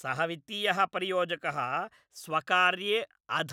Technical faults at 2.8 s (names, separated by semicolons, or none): none